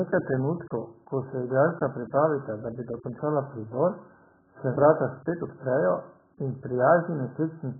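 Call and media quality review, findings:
AAC compression throughout, likely AAC-LC at a starved bitrate (sound fits about 8 kbps). Encoder cuts everything above 1.8 kHz and coarsely quantises the remaining bands. Result: dull, band-limited speech, heavily smeared consonants, warbling on sustained vowels, fizzy sibilants.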